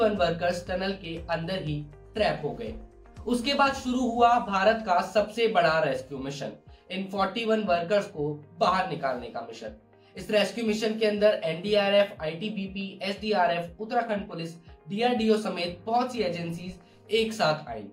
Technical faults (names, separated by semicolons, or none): none